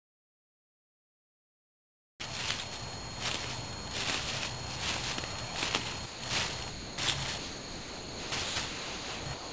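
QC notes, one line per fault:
0.00–2.20 s, comfort noise in place of the background: for the first 2.2 s the real background, which sits about 37 dB below the loud parts, gives way to a smoother synthetic noise about 20 dB quieter. This is likely discontinuous transmission, where the sender paused and the receiver filled the gap with generated noise. Unlike a voice-detector dropout, nothing but background is replaced here, and no foreground sound goes missing.
6.06–9.52 s, sound dropped by the voice detector: at 6.06–6.22, 6.70–6.98, 7.38–8.32, 8.44–8.56, 8.66–9.26 and 9.34–9.52 s, real sound lasting 160, 280, 940, 120, 600 and about 190 ms is cut away and replaced by steady synthetic noise. Each gap but the last, which runs to the end of the clip, ends when the detector triggers again. The likely cause is a sender-side detector that mistook these passages for background. Unlike comfort noise over a pause, actual content is lost here, not just the room.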